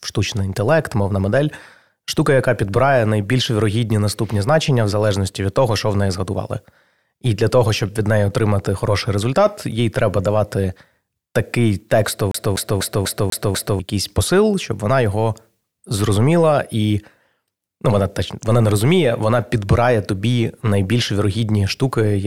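CD stuck on one turn, 12.31 to 13.79 s, in speech after "їй треба давати такий": a scratch keeps throwing the laser back, so a 247 ms slice repeats six times, muting at each jump, before "якийсь посил щоб вона".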